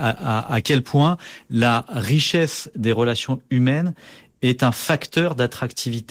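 No technical faults are audible in this speech recording.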